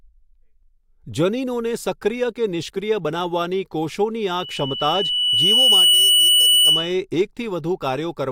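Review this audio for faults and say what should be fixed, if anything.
A loudspeaker feedback squeal starts at 4.40 s and runs until 6.98 s: a 3 kHz tone swells over about a second and a half to roughly 10 dB above the speech, as the microphone-to-loudspeaker loop gain exceeds unity there. Prevent it by reducing monitor gain, repositioning the microphone, or notching 3 kHz.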